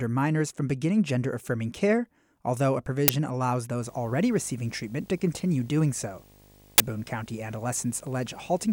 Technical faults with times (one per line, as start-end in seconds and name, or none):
3.08 uninitialised buffer
3.82-8.72 video or display buzz
6.78 uninitialised buffer